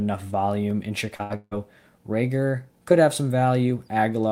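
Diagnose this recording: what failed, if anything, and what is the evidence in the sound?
A brief smear at 1.15–1.21 s is short concealed packet loss in the network path: about 40 ms never arrived, and the decoder extended the preceding speech for 35 ms to cover it.

At 1.23–1.32 s the speech turns into a held, fading continuation. This is a burst of packet loss: 60 ms went missing and the receiver synthesised 68 ms before real audio resumed further on.

From 1.36 to 1.53 s the speech stretches into a fading continuation for 155 ms, then a brief silence, and resumes with about 160 ms gone. The cause is likely a long network dropout.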